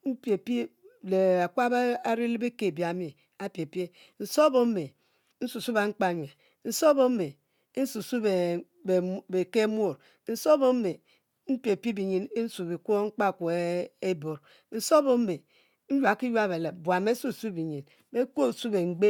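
No technical faults can be heard anywhere in the recording, and the signal stays steady and intact for its whole duration.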